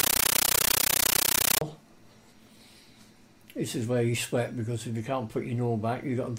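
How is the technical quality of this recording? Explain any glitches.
The opening stretch is badly corrupted. From 0.0 to 1.61 s, a compressed stream is played as audio: AC-3 data, which fits a 640 kbps Dolby Digital stream, is treated as raw samples. This produces loud static chattering in 13.3 ms noise bursts at 31.25 Hz. The regular burst-and-silence rhythm distinguishes it from random noise or clipping.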